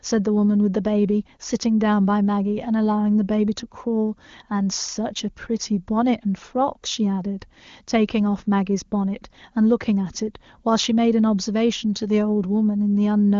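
No faults: the speech comes through AMR wideband (HD Voice) coding with at most faint codec colouring, which fits the codec's top rate of around 24 kbit/s.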